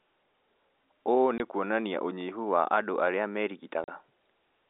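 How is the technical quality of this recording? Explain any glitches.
Two short dropouts mar this telephone-band speech recording. They are packet loss filled with silence: at 1.38–1.40 s, just before "kuonania ũnyihu wa andũ", a 20 ms hole, and at 3.84–3.88 s, right after "ũnyihu wa andũ arĩa", a 40 ms hole. Those lengths fit one and two lost 20 ms packets that the receiver replaced with silence. Each gap has hard edges. A waveform would show the signal dropping abruptly to silence, and a spectrogram would show clean vertical blank stripes.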